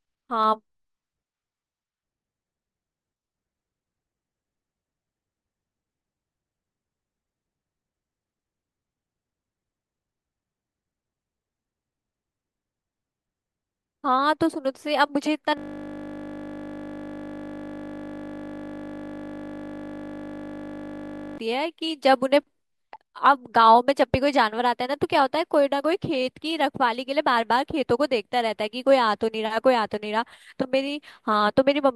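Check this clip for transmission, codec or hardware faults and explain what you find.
One hardware fault is present: a system hang loop from 15.58 s to 21.38 s. The host or driver stalled while the audio device kept replaying a single 20 ms ring buffer. The speech gives way to a steady 50 Hz buzz for almost six seconds.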